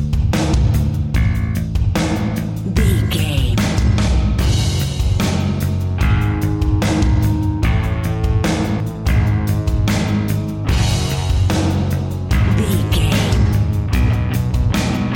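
Compressed frames skipped at 8.80 s: about a fifth of a second of the sound is never played, which fits a couple of missing or rejected 92.9 ms frames. The audio jumps forward.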